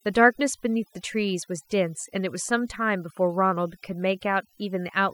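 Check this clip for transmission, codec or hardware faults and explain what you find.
Throughout the clip, the gaps between phrases fall to near silence scattered with small twinkling specks. That is overdone noise removal: a noise reduction stage set too aggressively cuts individual frequency bands almost to nothing whenever they sit close to its estimate of the noise floor. The quieter parts of the voice get caught alongside the noise, and isolated bands popping in and out produce the specks.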